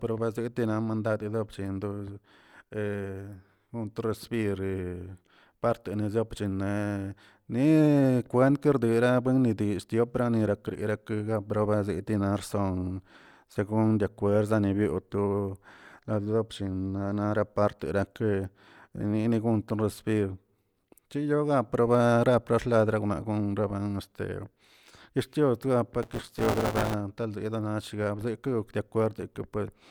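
Buffer tearing runs from 26.02 to 26.94 s: the writer and the playback hardware have slipped so they cross within each period, leaving roughly a third of every buffer filled with audio around 20 ms old. Hard joins produce a robotic 172 Hz rattle over the speech, which fits a 256-sample buffer.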